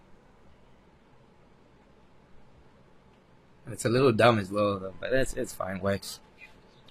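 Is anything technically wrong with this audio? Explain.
Yes. At 0.86 s the adaptive stream drops to a lower bitrate and stays there to the end. The connection likely slowed, so the player switched without a gap, which sounds like a move from about 96 kbit/s AAC to a 24 kbit/s HE-AAC version. The speech suddenly drops in quality and shows more codec artefacts.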